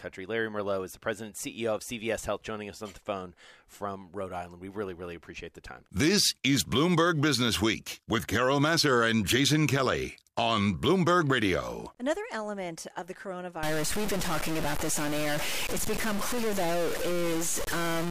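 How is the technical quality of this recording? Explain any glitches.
The last few seconds are damaged. A stuck bit starts at 13.63 s and runs to the end at 18.1 s. A single data bit, likely held at a fixed value by a fault in a converter or data line, shifts about half the samples by a step of roughly -25 dBFS, following the speech waveform. The speech turns harsh and buzzy, and the gaps between phrases fill with a loud, gritty noise.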